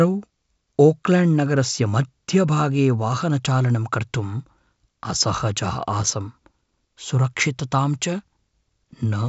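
No faults found in the speech; the G.722 wideband telephone coding at 64 kbit/s carries the band up to 7 kHz with at most a faint trace of the codec.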